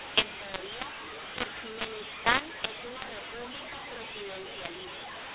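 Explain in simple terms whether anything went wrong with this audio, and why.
Yes, something went wrong, and it runs through the whole clip: a mu-law and A-law mix-up. The speech was stored in the A-law version of telephone coding but played back as if it were mu-law. Those two use different scales for squashing loudness into 8-bit steps, so every level gets mistranslated. Some parts come out too loud, others too soft, and the quiet gaps fill with hiss. That's why the voice sounds harsh and gritty from start to finish.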